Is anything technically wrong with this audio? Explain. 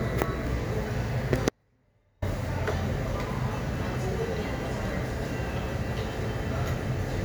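Yes. From 1.49 to 2.22 s there is an audio dropout to a faint residue. The sound cuts out abruptly for about 0.73 s, leaving only a faint leak roughly 35 dB down, likely a momentary signal loss while the path stayed live. Unlike a fade or a true pause, the break is instant and the gap is never fully silent.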